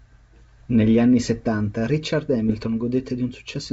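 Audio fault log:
2.48–2.67 s, bit errors on an ADPCM link: for just under 0.2 s the wideband G.722 sound breaks into pops and a rough, gritty burst with brief jumps in level. A sparse scatter of corrupted bits, somewhere under half a percent, reaches the ADPCM decoder. Each wrong bit also knocks its adaptive step size and predictor off track, so every error rings on for several milliseconds instead of staying a single click.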